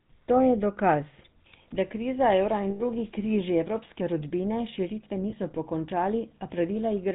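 Throughout, the speech passes through the GSM full-rate codec, which fits a 13 kbps stream. Its pulse-driven vocal-tract model removes everything above 4 kHz, leaving a plainly buzzy, gravelly roughness.

From 2.70 to 2.82 s, between "da kriza evra" and "križi evropske rodbine širitve", lost GSM frames were patched by repeating the last good frame, producing a rough, metallic ring lasting about 100 ms. A shorter patch from 5.30 to 5.33 s, just after "križi evropske rodbine širitve", rings briefly the same way.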